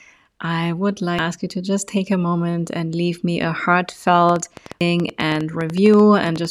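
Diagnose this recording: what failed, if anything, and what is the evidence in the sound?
Damaged data in the compressed stream, at the codec stage, shows up as a short glitch at 1.19 s and again at 4.81 s. The decoder hits corrupted frames and loses sync. On a spectrogram each is a brief broadband smear with a small discontinuity in the waveform.

A train of clicks runs from 4.29 to 6.46 s: about twenty similar pops at roughly 9 per second, unevenly spaced and peaking a few dB above the speech. The likely cause is analogue interference or a faulty connection or power supply. They appear as thin vertical lines on a spectrogram.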